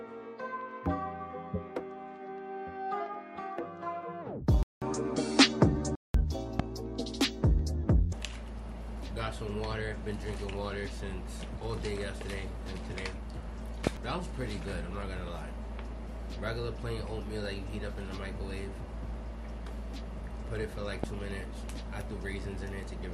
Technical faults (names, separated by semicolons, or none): input switched to a poorer device; loud pop